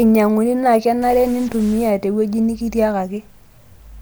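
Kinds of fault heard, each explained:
Stuck bit: from 1.02 to 1.90 s the speech is distorted, likely from one data bit held fixed so many samples jump by its weight. The waveform shows stepped offsets, and the spectrogram shows broadband hash filling even the quieter gaps.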